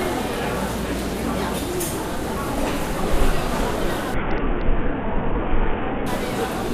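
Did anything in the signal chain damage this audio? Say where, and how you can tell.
Yes, Bluetooth codec stage: from 4.14 to 6.06 s an SBC bit pool drop starves upper sub-bands, dulling treble and adding grit a low-pass lacks.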